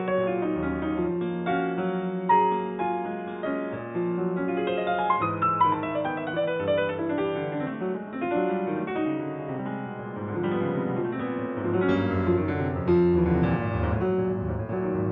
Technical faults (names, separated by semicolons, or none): input switched to a poorer device